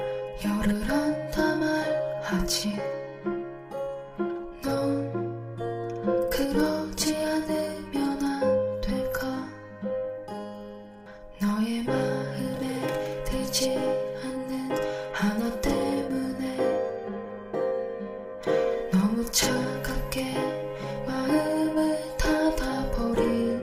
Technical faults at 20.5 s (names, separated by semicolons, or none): none